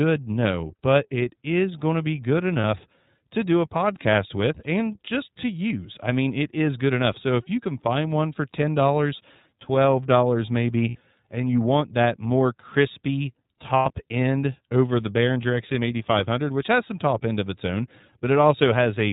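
Speech coded throughout with the iLBC codec, plainly audible as a band-limited, slightly rough and synthetic tone with nothing above 4 kHz, which fits its 30 ms, 13.33 kbit/s mode. Lost iLBC frames at 2.61, 10.89 and 13.77 s last 30, 60 and 90 ms, filled with a held, buzzy vowel rather than silence or a stutter, and the voice recovers almost at once.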